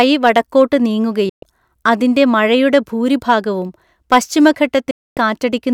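Hard clipping from 0.00 to 0.62 s, again briefly at 3.30 to 3.33 s, and from 4.12 to 4.46 s: the speech peaks exceed what a stage can pass, so their tops are cut flat. The first two overloads are only about 2 dB, giving a light crackle on the loudest moments. The last reaches about 5 dB, and the added high harmonics turn into a harsher fuzz.

Digital broadcast dropout at 1.29 to 1.43 s and 4.91 to 5.17 s: the receiver stops getting usable frames and mutes. It fades out over 3 ms, stays silent for 128 ms and then 256 ms, and comes back further along. Those lengths fit roughly four and eight lost 32 ms frames, and the speech sent during each gap never arrives.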